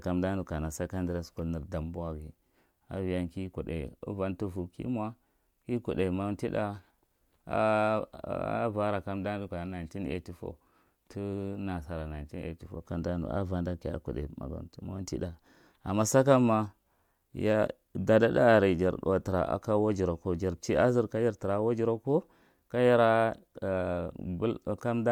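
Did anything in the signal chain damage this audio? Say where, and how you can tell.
No, nothing damaged it.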